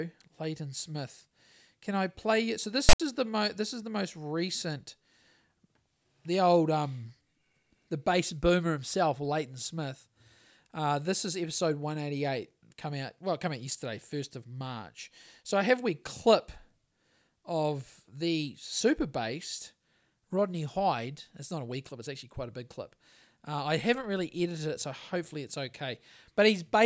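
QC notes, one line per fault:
2.89–3.00 s file tags played as audio: an abrupt, hard-edged rasp offset to one side, then dead silence, as tag text and its zero padding were read as samples.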